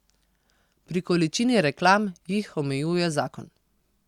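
Speech only, with no audible technical faults found.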